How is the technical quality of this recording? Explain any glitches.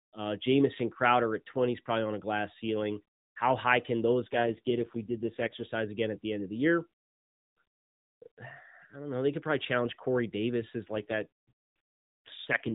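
The speech has two AMR rate drops, with the band staying at the 4 kHz limit of the AMR narrowband mobile codec throughout. From 4.24 to 5.66 s, after "high can" and before "again at the end", and again from 10.88 to 12.74 s, the network throttles the codec to spend bits on error protection, a fall that sounds like 12.2 to about 4.75 kbps. With fewer pulses per frame, the speech turns rougher and buzzier, without any gap.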